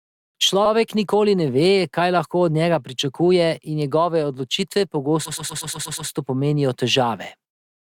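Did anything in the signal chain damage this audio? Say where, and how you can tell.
Yes. From 5.25 to 6.09 s the speech stutters: one 120 ms slice of sound plays over and over, seven extra times, so the passage runs about 840 ms longer than it should. This is repeated frames at the codec or storage stage. A short run of compressed frames, about six of them judging by the slice length, was written or delivered more than once, and the decoder simply played each copy in turn.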